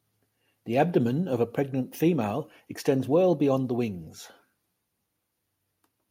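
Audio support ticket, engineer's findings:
Findings: no audio fault identified in the speech recording.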